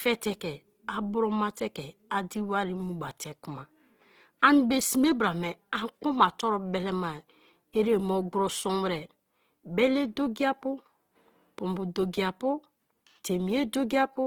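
From start to finish the speech carries plainly audible codec damage: a rough, grainy texture, with a noisy fizz where the upper harmonics should be clean. That's likely Opus compression in its music-oriented CELT mode, running short of bits at something around 16 kbps. It keeps each band's energy but patches detail with folded or noise-like content, so nothing sounds hollow, just gritty. The bandwidth stays wide, with nothing above about 20.4 kHz.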